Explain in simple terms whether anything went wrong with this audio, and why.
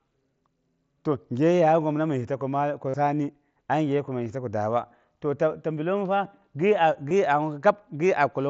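Concealed Bluetooth headset packet loss: just after "ta ko", at 2.89 to 2.94 s, lost audio is filled with a short, buzzy repeat instead of silence. There are briefer patches at 4.25 s, just before "yisa to", and at 7.09 s.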